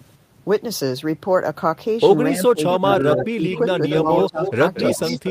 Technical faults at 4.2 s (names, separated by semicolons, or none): speech suppressed in double talk; echo leak